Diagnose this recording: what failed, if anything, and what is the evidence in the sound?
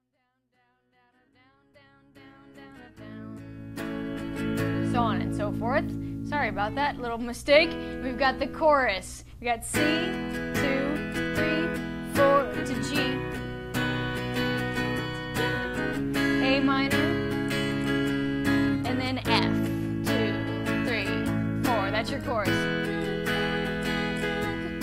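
Nothing in the signal chain failed: the level rises in a smooth, editor-style fade-in from the very beginning that completes at about 4.39 s, with no step or click, and the signal holds steady after that with no audible damage at any stage.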